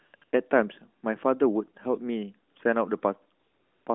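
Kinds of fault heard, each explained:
AMR comfort noise: the phone treated pauses as silence and stopped sending speech frames, so the receiver filled them with smooth synthetic noise built from a rough level-and-spectrum estimate. The real background is swapped out three times in the first 0.32 s, at 2.52–2.56 s, and at 3.40–3.86 s.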